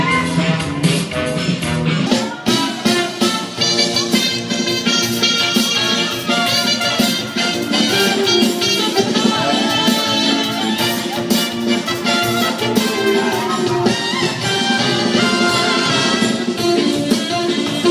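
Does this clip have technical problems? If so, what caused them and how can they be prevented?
Yes. From 0.0 to 2.07 s the sound drags low and slow, sitting about 5.5 semitones flat and running at 0.726 times normal speed, then snaps back to its proper pitch and pace. This is a wrong sample rate: the samples were played back at a lower rate than they were captured at, with no conversion, so pitch and tempo fell together by the same ratio. The figure fits 44.1 kHz material played at 32 kHz. To prevent it, read the file's declared rate and resample to the output device's rate before playback.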